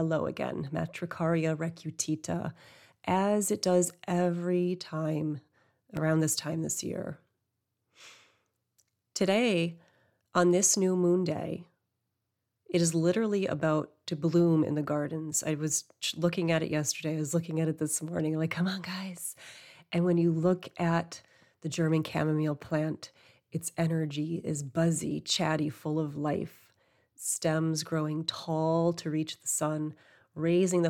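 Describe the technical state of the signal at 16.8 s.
At 16.8 s the speech signal is intact, with no audible dropout, clipping, distortion or other technical fault at that point.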